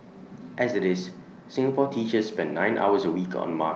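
Nothing goes wrong in this speech clip; it just sounds like ordinary call audio, with the highs stopping at around 8 kHz the way an Opus call would leave them.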